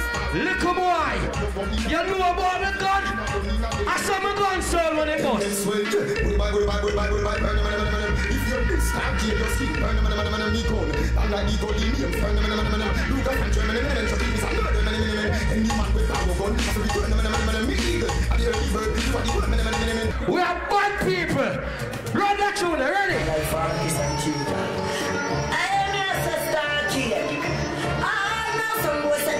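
At 16.52 s and again at 23.10 s the zero line of the waveform jumps abruptly, a DC step of about -26 dBFS each time. Both offsets bleed away through a 20 Hz high-pass response rather than holding, so each one sounds like a brief low thump or click. The sound carries on unchanged through both steps, since the fault is a shift in the baseline and not a change in the signal itself.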